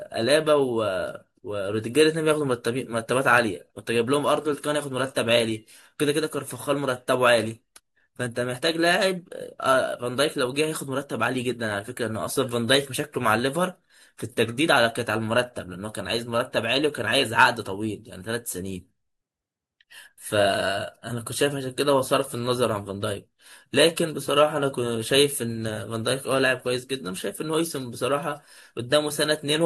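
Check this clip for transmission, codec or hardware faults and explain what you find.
No faults can be heard anywhere in this recording.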